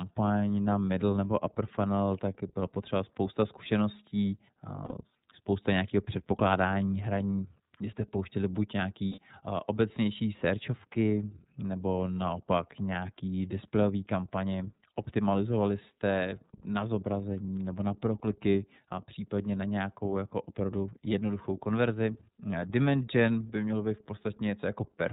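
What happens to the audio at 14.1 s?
Nothing sudden happens at 14.1 s. What you hear there is the iLBC codec, which runs through the whole clip. Everything above 4 kHz is gone, so the speech sounds narrowband and boxy. Each frame's excitation is coded on its own, without leaning on the previous one, which gives the voice a plainly audible rough, slightly synthetic edge. That behaviour fits iLBC's 30 ms frame mode at around 13.33 kbps.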